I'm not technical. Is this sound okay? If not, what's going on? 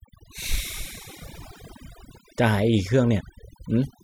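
No. This speech has overdone noise removal through the whole clip. A cleanup tool was set too strong. It cut away background noise and faint parts of the voice too. The pauses sound nearly silent with tiny twinkling specks.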